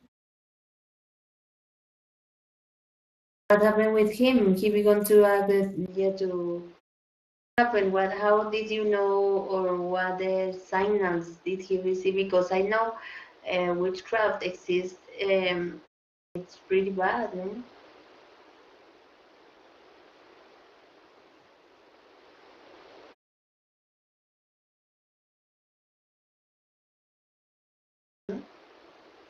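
Speex codec damage runs through the whole speech clip: the voice has the hoarse, grainy texture of a CELP coder short of excitation bits, and the upper band sounds like shaped noise rather than real detail. The degree of damage fits a mid-rate setting around 22 kbps.

At 3.28 s, after the opening 3.28 s of silence, the first speech arrives with a clipped start after a pause. About 0.22 s of its onset is missing, so the sound begins abruptly, as if the output device was still waking up.

At 5.86 s there is a 20 ms gap, and then the sound turns duller and quieter, by roughly 5 dB. Nothing remains above 6.7 kHz, and a new noise floor sits roughly 30 dB below the speech. This most likely reflects the input switched to a poorer device, which persists to the end.

The clipped start recurs at 7.32, 16.11 and 28.03 s, each losing about 0.24 to 0.26 s after pauses of 0.6, 0.32 and 4.97 s.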